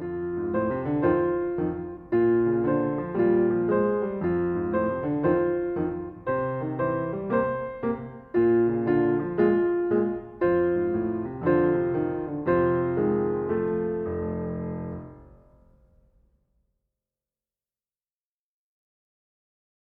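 Nothing stood out on listening; no technical faults could be heard anywhere in the audio.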